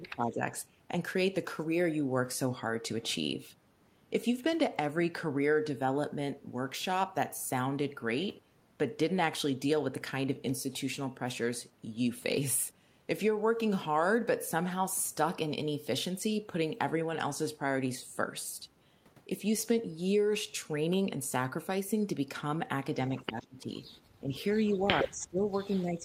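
Right at the start, 0 to 0.47 s, the speech dips by about 15 dB, most likely speech suppressed in double talk: the echo canceller probably couldn't tell this talker from loudspeaker echo and turned everything down. It happens again from 23.21 to 23.69 s, dropping about 20 dB. Overlapping that, from 23.42 to 23.98 s, there's a faint delayed copy of the voice trailing 123 ms behind, about 30 dB down. That's an echo leak, likely a loudspeaker echo the canceller didn't fully remove. From 24.2 s to the end the speech is suppressed again by about 15 dB. Between 24.35 and 25.05 s the same 123 ms echo returns, now only about 5 dB below the speech, so it's clearly audible.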